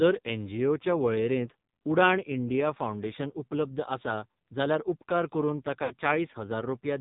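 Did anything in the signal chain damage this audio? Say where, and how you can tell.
Yes. At the codec stage, AMR narrowband mobile coding runs throughout: nothing passes above 4 kHz, and the speech is buzzy and synthetic, consistent with a low mode near 5.9 kbps.

On the network side, lost AMR speech frames occur at 5.84–5.93 s, just after "आसा जाल्यार उपकार करून". The decoder repeats the last pitch with falling gain, producing a smeared dip that fits about 60 ms missing.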